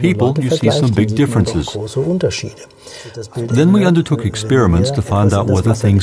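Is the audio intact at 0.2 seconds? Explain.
Yes, the audio is intact at 0.2 seconds, with no dropout, click, distortion or other fault at that moment.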